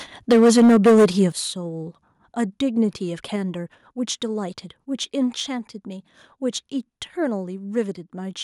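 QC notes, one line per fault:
0.30–1.23 s, microphone overload: The loudest syllables in this stretch take on a harsh, crackling edge, with peaks pushed about 10 dB past full scale. The likely cause is input volume set too high, so the converter ran out of headroom and sliced off the tops of the waveform. Around a fifth of the samples sit pinned at the rails, which shows up as flat-topped plateaus on the waveform and as broadband smearing of harmonics up into the kHz range on a spectrogram.
0.32 s and 1.32 s, microphone volume stepped down: The level drops abruptly twice, first by about 2 dB just after the distortion begins, then by about 8 dB right after it ends, with voice and background falling together. This is likely call software reacting to the clipping by cutting the device's input gain in single steps. On the waveform the envelope shows a clean, instantaneous step down at each point. 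On a spectrogram the whole band, noise floor included, darkens at once, with no fade.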